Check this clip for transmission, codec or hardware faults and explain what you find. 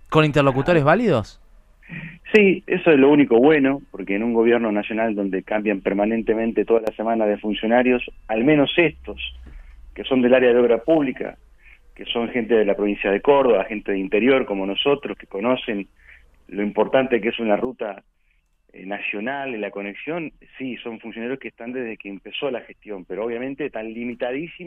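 Two sudden gain jumps. At 6.78 s the level falls by about 13 dB for roughly 90 ms, to 6.87 s. At 17.65 s it drops about 10 dB and stays down to the end. Sound and noise floor shift together, likely from gain applied without a ramp.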